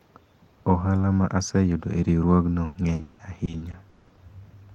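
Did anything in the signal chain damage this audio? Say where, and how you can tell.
Yes: repeated packet loss (robotic sound) at the network stage, from 2.65 to 4.19 s. Over that stretch the speech breaks up into ten gaps, the longest about 180 ms, and roughly 620 ms in total is covered by concealment, about 40% of the span. Each time audio fails to arrive, the receiver stretches the last sound it had, and the next gap follows soon after. That is what gives the passage its choppy texture with pieces missing.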